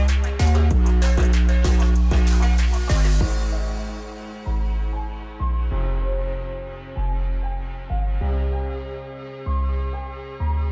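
Nothing goes wrong anywhere in the clip, so there's no technical fault to point to at any moment.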